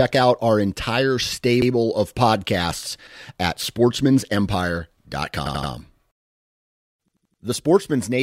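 New audio failed to reach the playback device in time, so it replayed its last buffer of speech instead, a repeated buffer fault. Each repeat lasts about 85 ms, which fits a 4096-sample buffer. A fragment plays twice at 1.62 to 1.71 s and 3.07 to 3.16 s, four times at 5.46 to 5.72 s, and five times at 7.08 to 7.42 s. Each is heard as a stutter with hard joins, and no speech seems to be skipped.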